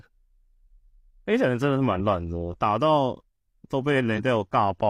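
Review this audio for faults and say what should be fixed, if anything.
Damaged data in the compressed stream at 1.95–2.01 s and 4.14–4.20 s: corrupted frames make the decoder misread and lose sync, producing brief glitches in the speech. Prevent this by verifying file integrity with checksums after transfer and re-encoding from an intact source.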